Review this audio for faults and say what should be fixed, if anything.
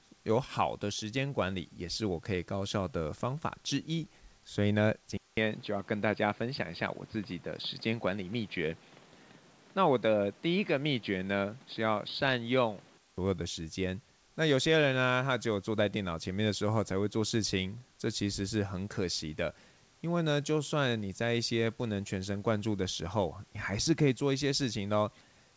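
Input switched to a poorer device, 5.17 to 13.18 s: after a 200 ms silence the speech turns dull, with nothing above 4.9 kHz instead of the 8 kHz reached over the G.722 call path elsewhere. A new noise floor sits roughly 30 dB below the speech, though loudness barely changes. The likely cause is the system moving to a lower-grade microphone or headset call profile mid-recording, then switching back. To prevent this, lock the input device for the session and turn off automatic device switching.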